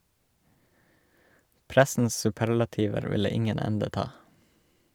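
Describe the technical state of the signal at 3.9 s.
At 3.9 s the speech signal is intact, with no audible technical fault at that moment.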